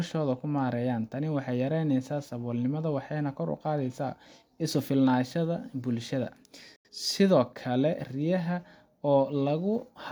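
Speech, with a digital broadcast dropout from 6.76 to 6.89 s: the receiver stopped getting usable frames and muted, fading out over about 3 ms and staying silent until clean frames arrived, so about 85 ms of programme is gone, which points to a couple of lost frames. Unlike a codec's packet-loss concealment, nothing is smeared or repeated across the gap. The audio simply drops to silence and resumes later in the speech.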